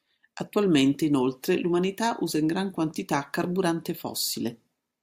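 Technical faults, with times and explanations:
No technical faults can be heard in this speech recording. There is nothing to time or explain.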